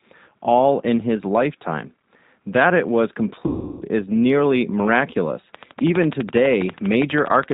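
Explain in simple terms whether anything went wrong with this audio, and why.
Yes, two things went wrong. Throughout the recording the speech sounds slightly rough, muffled and a bit robotic. That is the G.729 codec, a low-data phone-call format that rebuilds each voice from a simplified model and cuts off all the higher, crisp sounds.

From about 3.47 to 3.83 s, just after "it was" and before "is nearly miraculous", the speech smears into a buzzy tone or coloured noise that fades. This is VoIP packet loss concealed by the speech codec. About a third of a second of audio never arrived, so the decoder stretched the last sound it had and faded it out. The voice sounds weak for a moment after audio resumes.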